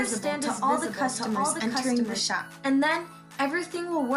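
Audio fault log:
0.0–2.2 s, doubled audio track: already running as the clip opens, a dry, full-band second copy trails the original by roughly 0.7 s at around 5 dB lower, without decay or room colour, then stops abruptly at 2.2 s; likely a slower second capture path mixed in.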